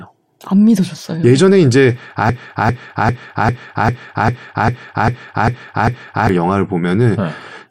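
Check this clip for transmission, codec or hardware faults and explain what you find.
One fault is present: a broken-record loop from 2.29 s to 6.29 s. For about four seconds, a 0.40 s fragment of the speech repeats exactly, back to back, ten times. This stutter most likely comes from the player or stream stalling and re-sending the last chunk it held in its buffer instead of new audio. Whatever speech should have played across those four seconds is gone. Normal speech resumes only after 6.29 s, with no catch-up.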